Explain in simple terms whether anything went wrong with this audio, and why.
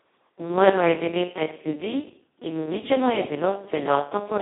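Something did go wrong. The speech passed through the Speex codec at a very low quality setting, so from start to finish it sounds hoarse, buzzy and robotic, with nothing above 3.8 kHz. A plain phone line would only sound muffled, but here the voice itself is roughly rebuilt.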